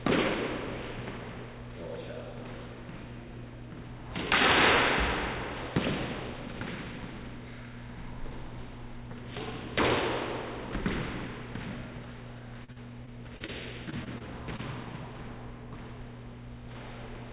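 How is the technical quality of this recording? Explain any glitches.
Two bursts of repeated packet loss affect these everyday sounds. The audio came through a call path with nothing above 4 kHz, which fits G.711 mu-law.

From 12.64 to 13.50 s (five gaps) and from 13.90 to 14.60 s (four gaps), packets kept going missing. Each hole, up to 40 ms long, was patched by extending the preceding sound. The result is choppy, robotic audio with pieces missing.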